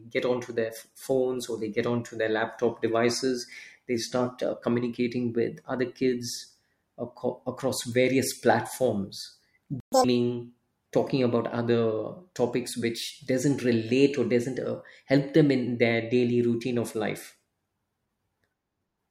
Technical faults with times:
9.80-9.92 playback stall
9.92-10.04 catch-up at higher speed

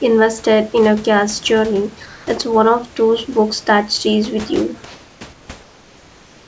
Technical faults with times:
2.06-2.27 comfort noise in place of the background
5.33-6.47 comfort noise in place of the background

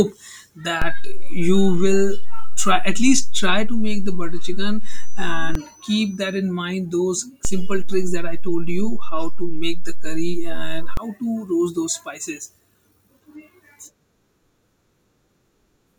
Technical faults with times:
0.82-5.55 DC step
7.45-10.97 DC step

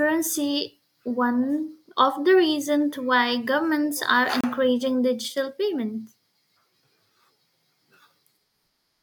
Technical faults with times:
4.41-4.44 gap at a join of encoded pieces

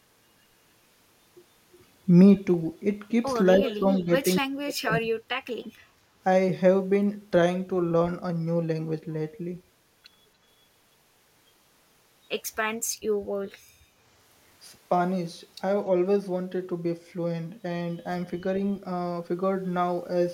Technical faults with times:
3.58-4.09 speech suppressed in double talk
3.65-4.04 echo leak
4.35-5.07 speech suppressed in double talk
13.74-13.96 background gated by the echo canceller

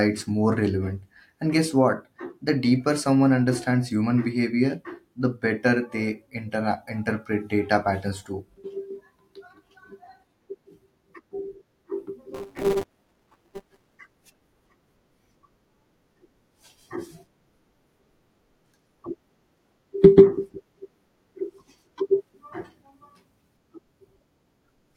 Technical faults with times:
12.34-13.96 buffer tearing

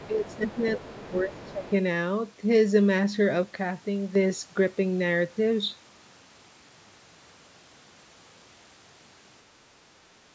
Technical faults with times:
0.00-1.73 other side's voice leaking through
0.07-0.61 speech suppressed in double talk
0.86-1.65 speech suppressed in double talk
3.43-4.15 one channel drops out

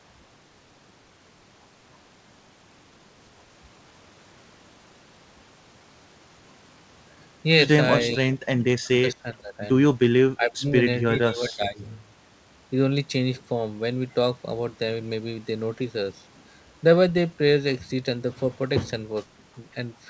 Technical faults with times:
8.34-8.40 speech suppressed in double talk
8.91-9.62 speech suppressed in double talk
10.35-10.75 speech suppressed in double talk
11.08-11.81 speech suppressed in double talk

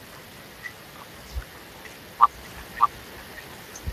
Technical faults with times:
0.00-3.92 Speex codec
2.43-3.92 doubled audio track

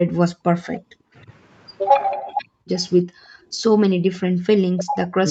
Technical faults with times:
0.05-0.55 background gated by the echo canceller
1.01-1.06 speech suppressed in double talk
2.17-2.71 background gated by the echo canceller
3.23-3.32 speech suppressed in double talk
3.60-4.09 background gated by the echo canceller
4.39-5.31 speech suppressed in double talk

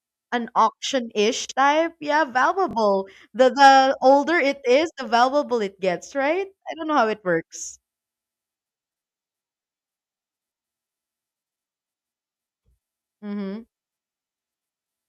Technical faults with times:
1.45-1.51 chunks out of order
2.69-2.73 chunks out of order
11.52-11.58 chunks out of order

